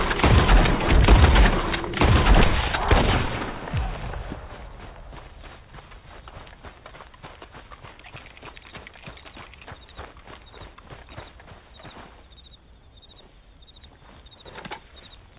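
No technical faults are audible.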